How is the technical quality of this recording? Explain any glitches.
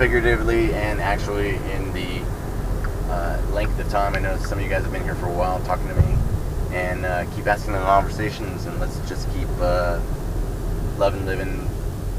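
The recording is marred by one fault running through it. A video or display buzz is present throughout: a screen or video cable couples into the audio path, laying a 75 Hz buzz with hash above it, sitting roughly 20 dB below the sound.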